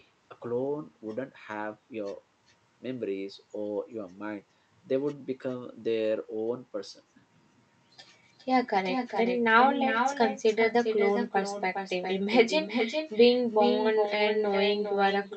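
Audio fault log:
Throughout: echo with no canceller. Every phrase of speech is trailed, around 400 ms later, by a copy about 6 dB down that sounds thinner, since the far end's loudspeaker feeds its mic and nothing strips that return before it crosses the network back.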